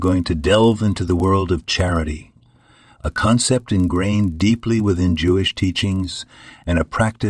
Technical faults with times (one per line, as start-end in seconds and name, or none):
0.00-7.29 resampler restarted on every block